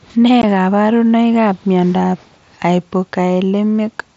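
At 0.42 s, just before "kaparunoik ap miondap", unconcealed Bluetooth headset packet loss leaves a 15 ms gap with abrupt edges. It fits two lost frames that were never patched over, which is why it sounds like a hard dropout rather than a smeared repair.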